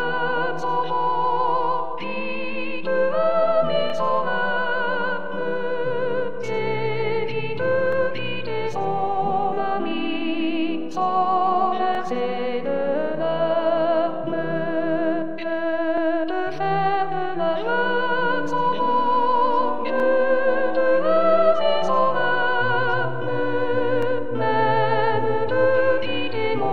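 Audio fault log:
3.90–3.92, 7.92–7.95, 11.95–11.98, 15.98–16.00, 20.00–20.03, 24.03–24.05 s: overlapping chunks. Each 4 s chunk restarts 25 ms early, so that slice plays twice and gives a regular stutter. The waveform shows the repeated segment, and the spectrogram shows thin vertical seams.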